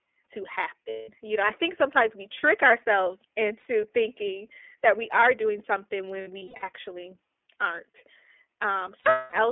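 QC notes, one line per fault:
Throughout, iLBC codec: the sound is squeezed into a telephone band of about 300 Hz to 3.4 kHz, with a plainly rough, synthetic edge. This fits the 13.33 kbps mode with 30 ms frames, each coded on its own from a simplified excitation.
0.90–1.09 s, 3.59–3.67 s, 6.21–6.64 s and 8.99–9.33 s, lost iLBC frames: each gap fills with a held, buzzy vowel-like tone as the decoder repeats the last pitch cycle mixed with noise. The first gap lasts 180 ms. The second lasts 60 ms and falls between "sometimes we trick ourselves" and "thinking that we are". The third, right after "we are doing something", is 240 ms of losses scattered over 420 ms, the longest run about 100 ms. The last is 300 ms of losses spread over 330 ms, its longest run around 200 ms. The voice returns to normal almost immediately after each gap.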